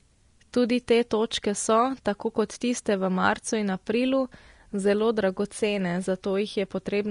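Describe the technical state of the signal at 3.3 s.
At 3.3 s the speech carries the same damage heard from start to finish: the treble stops dead at 10.6 kHz, and what remains of the upper band sounds hissy and grainy, with consonant attacks smeared and tones roughened. This is likely Vorbis compression at a low quality setting, which fits a bitrate in the region of 36 kbps. The codec coarsely quantises the residue above its spectral floor, so fine high-frequency detail turns into noise of similar energy. On a spectrogram there is an empty band above 10.6 kHz and blotchy, speckled texture below it; the waveform itself looks largely ordinary.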